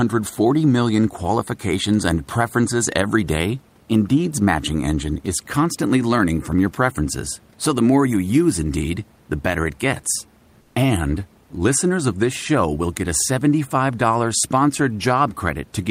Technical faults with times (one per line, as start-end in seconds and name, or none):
10.61-10.75 comfort noise in place of the background